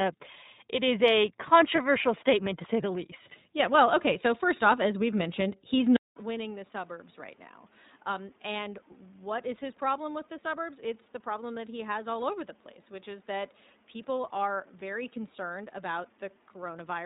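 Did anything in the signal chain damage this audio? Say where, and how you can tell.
Yes. At the codec stage the whole speech clip runs through the iLBC codec, which fits a 15.2 kbps mode with 20 ms frames. The damage is plainly audible: a slightly rough, synthetic edge, and nothing above 4 kHz. On a spectrogram there is a hard ceiling near 4 kHz from start to finish. Each frame's excitation is coded on its own, without leaning on the frame before.

At the network stage a single frame, 20 ms long, was lost at 1.76 s, between "it is a" and "statement to say the". These are lost iLBC frames. The decoder fills the hole by repeating the last pitch cycle with some noise mixed in, so you hear a brief held, buzzy vowel. On the waveform it shows as a short patch of periodic repetition. The speech comes back clean at once because iLBC frames don't depend on the frame before.

At the capture stage, from 5.96 s after "as we've mentioned he's" to the end, the sound turns duller and boxier. 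The level drops by about 10 dB and the background noise rises to about 30 dB below the speech. This is likely an input switched to a poorer device. A 200 ms silence marks the switch, which shows as a flat gap in the waveform. After it, the spectrogram's top edge falls to about 3.9 kHz and the noise floor behind the speech is raised.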